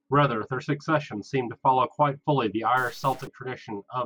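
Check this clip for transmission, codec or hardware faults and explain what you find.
One hardware-type fault is audible in this speech clip. From 2.77 to 3.27 s there is a stretch of harsh, buzzy distortion that fits a stuck bit. The likely cause is one data bit held at a fixed value by a faulty line or converter. Roughly half the samples then land off by that bit's weight, a step of around -40 dBFS. Because the error follows the waveform's sign and level, it sounds like gritty buzz riding on the speech rather than steady hiss.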